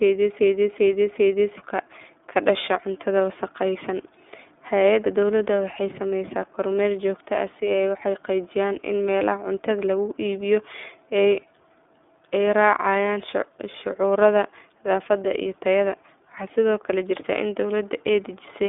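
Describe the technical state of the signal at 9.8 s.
At 9.8 s the speech carries iLBC codec damage, present for the entire clip rather than only at this moment. The line band runs from about 250 Hz to 3.6 kHz, with nothing above 3.7 kHz. Each 30 ms frame has its excitation coded independently of the previous one, consistent with the 13.33 kbps mode, which leaves the speech intelligible but plainly rough and synthetic, with a dull, band-limited telephone character.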